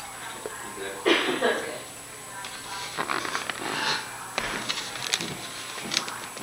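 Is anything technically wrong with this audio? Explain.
No, nothing technically wrong can be heard in this audio. There are no faults to point to anywhere in the recording.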